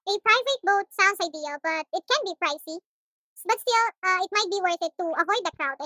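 From start to end, the speech runs too fast and sounds too high. This is a wrong sample rate fault. Playback is about 1.45 times too fast, raising pitch by 6.45 semitones. That fits audio recorded near 22 kHz being played at 32 kHz without conversion.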